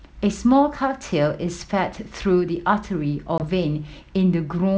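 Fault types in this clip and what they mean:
Packet loss on an ADPCM call: At 3.38 s the sound drops into a hard-edged 20 ms silence, about one packet. The decoder's predictor and step size then disagree with the sender's. The G.722 audio returns slightly distorted, settling by 3.45 s.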